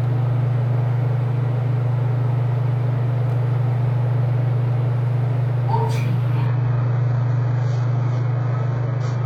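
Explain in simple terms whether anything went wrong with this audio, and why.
Around 6.47 s the sound suddenly gets duller and a bit swirly, staying that way to the end. That's the adaptive stream dropping to a lower bitrate, likely after the connection slowed. It cuts everything above about 7.8 kHz, with no gap at the switch.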